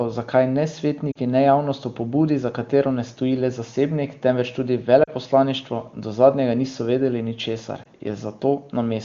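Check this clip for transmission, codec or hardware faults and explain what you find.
Three short dropouts from lost AMR speech frames: 1.11–1.17 s (after "zakaj ne"), 5.04–5.11 s (after "le zasebnik temveč tudi") and 7.83–7.88 s. The decoder fills the gaps by repeating recent pitch and vocal-tract parameters at falling gain, heard as brief dips.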